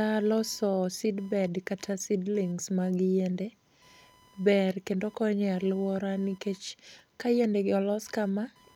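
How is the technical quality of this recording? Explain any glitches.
The recording is compromised by one fault, computer activity noise, which runs for the entire duration. Throughout, a faint buzzing chirp pulsing at around 1 kHz sits roughly 35 dB below the speech. It arises when processor, graphics or mouse load shifts the shared ground feeding the audio circuit, so the scratchy texture tracks the computer's workload rather than the talker.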